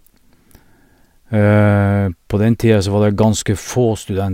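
No dropouts, glitches, distortion or other technical faults can be heard anywhere in the recording.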